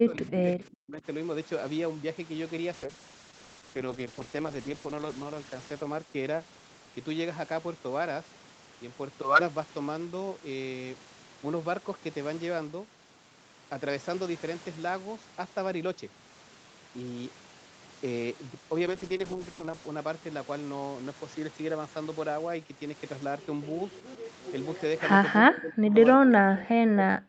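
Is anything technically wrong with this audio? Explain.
Yes, there are two kinds of fault.

Speech suppressed in double talk occurs from 0.0 to 1.05 s, from 25.4 to 25.95 s, and from 26.17 s to the end. The speech dips by up to about 40 dB. The likely cause is an echo canceller that cannot separate the near talker from loudspeaker echo while both sides speak, so it attenuates everything.

A call bitrate drop occurs from 2.75 to 7.21 s and from 18.87 to 20.25 s. The Opus encoder's rate falls from 48 to 10 kbps and stays at the floor for about 2.2 s and 1.0 s respectively. With so few bits, the coding becomes coarse and the speech sounds rough and watery until the rate recovers.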